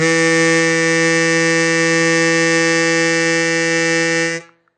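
Throughout the music, nothing sounds above 9 kHz, and the damage is plainly audible. This is likely MP3 compression, starved of bits at roughly 46 kbps.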